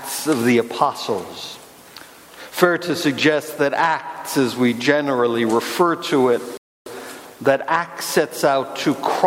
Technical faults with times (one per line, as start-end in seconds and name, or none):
6.57-6.86 playback stall